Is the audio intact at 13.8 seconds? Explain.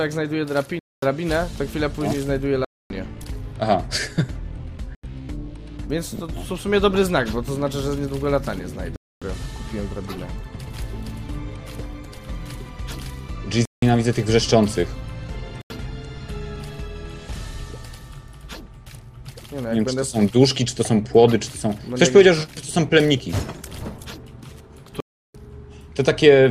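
No. From 13.65 to 13.82 s the sound drops into a short, dead hole about 170 ms long, cutting out and returning abruptly. This is a block of digital silence: a chunk of samples, which fits an 8192-sample block, was replaced by zeros, with no fade at either edge.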